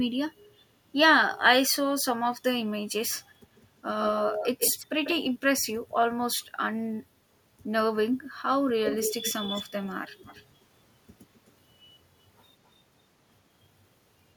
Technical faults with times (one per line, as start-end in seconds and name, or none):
3.56-3.62 echo leak
4.04-5.15 echo leak
8.86-10.45 echo leak
11.35-11.52 echo leak